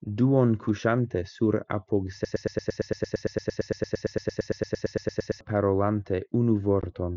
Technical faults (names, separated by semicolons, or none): broken-record loop; unconcealed Bluetooth headset packet loss